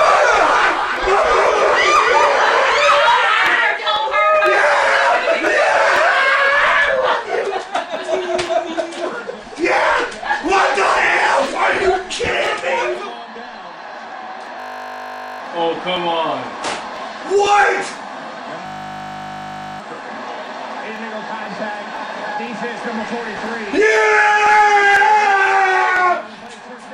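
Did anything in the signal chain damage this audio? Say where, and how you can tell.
Yes. The audio opens with a doubled audio track. From the start until 2.72 s, a second full-band copy trails the first by roughly 0.3 s. It sits about 5 dB lower. It has no decay and no room colour, so it is not an echo. At 2.72 s it cuts off abruptly. The stage is likely the capture or routing path: the same sound is picked up twice, once through a slower route.

There are two system hang loops, at 14.6 to 15.4 s and at 18.66 to 19.8 s. Each time, a 20 ms slice of audio repeats exactly. The result is a steady 50 Hz buzz, not a stutter. This is the driver or buffer stage. The computer stalled while the sound hardware kept replaying its ring buffer. The short cycle fits a small buffer. About 0.7 s of audio is lost in the first loop, and about 1 s in the second.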